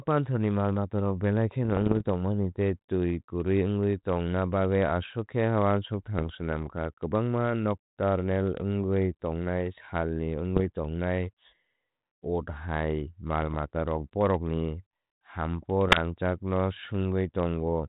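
Pops and rough, gritty bursts with brief jumps in level break into the speech five times: from 1.64 to 2.08 s, between "ni malmatarok belai" and "tongmani tei twi kwrwi"; at 6.19 to 6.32 s; at 10.56 to 10.60 s, after "nocturnal wngwi tongnai salni"; at 13.42 to 13.55 s; and at 15.86 to 16.00 s, after "bohrokni humpo". These are bit errors on an ADPCM link, a few flipped bits per thousand in the 32 kbit/s G.726 stream. Each error throws off the decoder's step size and prediction, so the damage rings on briefly.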